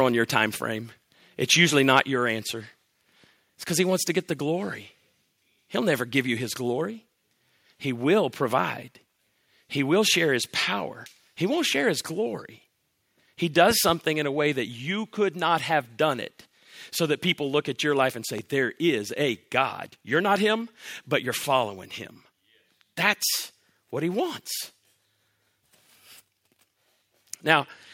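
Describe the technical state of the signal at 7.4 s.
At 7.4 s the signal is intact, with no audible fault at that moment.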